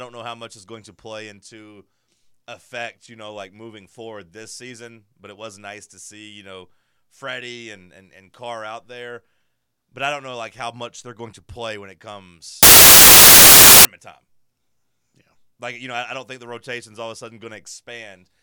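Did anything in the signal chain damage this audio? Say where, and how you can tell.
Yes. At the sample-format conversion stage, samples were built from the wrong bytes between 12.63 and 13.85 s. The reader assembled each sample with its bytes misaligned or in the wrong order, so the rapidly fluctuating low-order bits landed in the high-order position. For those 1.2 seconds the speech is replaced by loud, harsh broadband noise.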